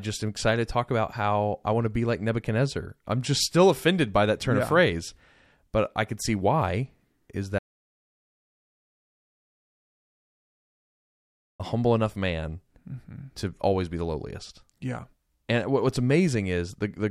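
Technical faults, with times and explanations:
7.59 to 11.60 s, audio dropout to silence: the speech breaks off mid-flow and about 4.0 s vanishes. The gap is silent with no room tone or hiss, and the sound returns just as abruptly. The likely cause is a lost input, such as a disconnected device or failed link, while recording kept writing silence. A noise gate or natural pause would leave some residual floor, breaths or gradual edges.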